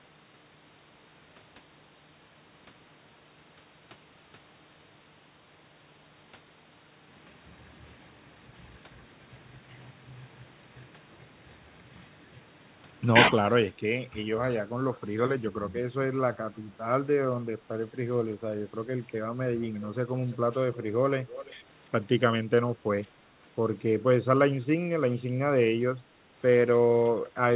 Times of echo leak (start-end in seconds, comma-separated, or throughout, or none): 19.64-19.87, 20.31-20.36, 21.27-21.55